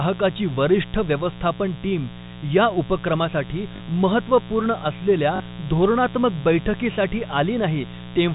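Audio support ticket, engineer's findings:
Mains buzz, entire clip: steady raspy 60 Hz buzz with harmonics into the kHz range, roughly 15 dB under the speech. Probable pickup via dimmer, rectifier or unshielded cable; switching spikes twice per mains cycle, riding through the narrowband G.711 path.

Packet loss with last packet repeated, 3.76–3.80 s and 5.36–5.40 s: brief robotic stutter. Each 40 ms gap fits two lost 20 ms packets; the receiver replayed the previous packet.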